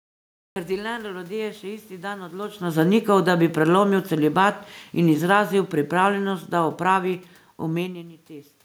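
Right at the top there's a cut-off start: the first 0.56 s is pure digital silence, and then the speech just appears mid-sound with no attack or fade-in. That's what you get when the recording or stream begins late and catches a sound already in progress. So the opening is missing, and the first thing you hear is an abrupt entry at 0.56 s.

After "dan odločno", at 3.02 s, there's automatic gain falling. The gain control found the input too loud, or its background noise too strong, and gradually pulled its gain down by about 8 dB until 7.94 s. You can tell it's the gain and not the talker because the room noise sinks right along with the speech. The talker's own shifts in distance, around 2.5 s and again near 7.5 s, stand apart from that slow slide.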